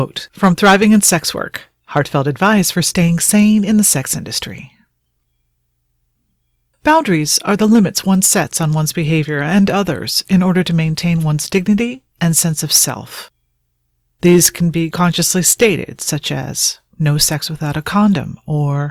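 Loud peaks throughout crackle: hard clipping, with the signal driven about 9 dB over the limit and its tops cut flat.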